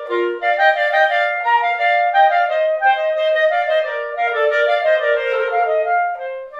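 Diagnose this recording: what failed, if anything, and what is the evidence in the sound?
Nothing failed: no stage in the chain, from wiring and conversion through buffering, transmission and storage to playback, leaves any audible trace of a fault anywhere in the recording.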